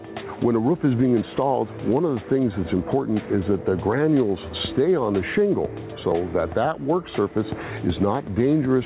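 Gain pumping is present throughout: the gain was likely set far too high, so a fast limiter ducks each loud sound, with the gain swinging by around 10 dB. All of this comes through a call-band path with nothing above 4 kHz, which fits G.711 mu-law.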